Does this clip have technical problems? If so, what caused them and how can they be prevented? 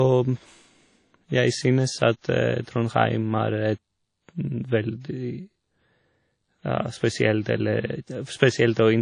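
Yes. Throughout, the speech rings and sounds washy, with breathing hiss and nothing above 10 kHz, likely WMA compression smearing quantisation noise at around 32 kbps. Encoding at a higher bitrate, or with a better codec, would prevent it.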